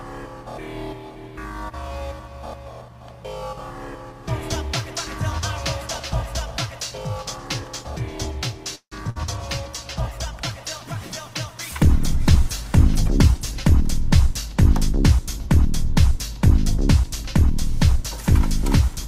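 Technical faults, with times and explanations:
8.75–8.94 s, call audio freeze: the sound stretches into a fading fill that falls silent for about 90 ms, then resumes where it stopped. Nothing is skipped, which points to delayed packets likely draining the jitter buffer.
9.10–9.17 s, burst of packet loss: a 59 ms fading fill stands in for about 60 ms of audio that never returns. Unlike the freeze, the sound resumes further on.
9.22–13.69 s, call bitrate drop: the encoder falls from 64 to 16 kbps and stays at that rate for about 4.4 s, making the sound coarser throughout rather than briefly interrupted, until it clears around 13.69 s.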